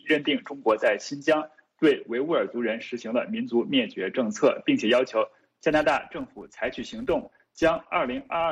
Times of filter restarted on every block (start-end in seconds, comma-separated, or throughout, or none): 5.71-8.51